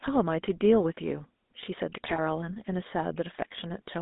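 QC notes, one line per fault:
Throughout: GSM full-rate codec. The speech is band-limited to roughly 200 Hz to 3.7 kHz and carries the codec's buzzy, gravelly roughness, plainly audible. The vocal tract is modelled and driven by a sparse, regularly spaced pulse excitation, consistent with 13 kbps full-rate coding.
2.06 to 2.20 s: GSM bit errors. For about 140 ms the speech breaks into squawks, pops and gargling. Corrupted filter, pitch or gain parameters reached the decoder across several consecutive frames, which fits a bit-error rate of around 2 percent on a weak link.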